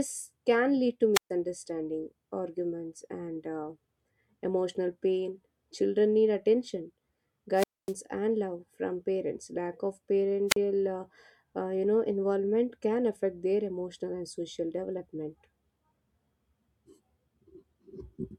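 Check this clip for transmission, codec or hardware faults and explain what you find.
Three wireless microphone squelch dropouts break up the speech. At 1.14 to 1.30 s, 7.55 to 7.94 s and 10.48 to 10.57 s, a short surge of hiss leads into a gap of near silence lasting about 131 ms, 246 ms and 41 ms respectively, before the voice comes back. Each time, the analogue FM radio link faded, noise rose as the signal weakened, and the receiver's squelch muted the output until the carrier recovered.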